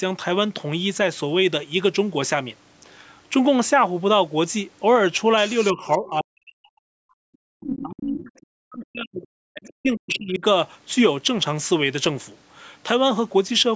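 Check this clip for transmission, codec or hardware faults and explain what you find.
Two echo-related faults appear in the middle of the clip, between 5.49 and 10.44 s.

Other side's voice leaking through happens at 5.49–5.95, 7.63–8.43, 9.68–9.73 and 10.14–10.18 s. A second voice, likely loudspeaker echo the canceller failed to remove, sits below the speech, strongest at 7.63–8.43 s. On a spectrogram it shows as separate harmonic traces under the main voice.

Speech suppressed in double talk runs from 5.73 to 10.44 s, about four seconds in total. While both sides overlap, the talker's level dips by as much as 40 dB, likely because the echo canceller attenuated everything. The waveform shows sudden envelope holes, and the spectrogram shows energy gaps.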